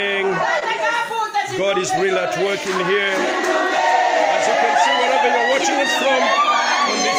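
At 0.59 to 0.63 s there is a brief smear where the sound wobbles and blurs for an instant. This is short concealed packet loss: about 20 ms of audio arrived too late, so the receiver extended the preceding sound to fill the gap before fading back in.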